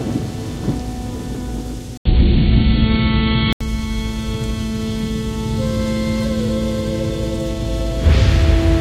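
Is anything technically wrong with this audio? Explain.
Yes. From 1.97 to 3.61 s the input switched to a poorer device, likely another microphone. An 80 ms gap marks the switch. Nothing above 4.4 kHz passes, so the sound turns duller. The level shifts by about 5 dB, and new background noise appears about 45 dB down.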